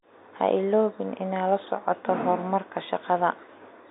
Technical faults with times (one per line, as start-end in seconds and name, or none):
none